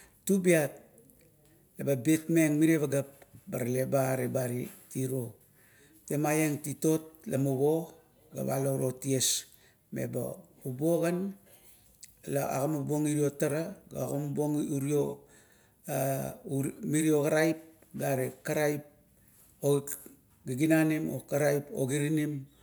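No technical faults can be heard in this recording.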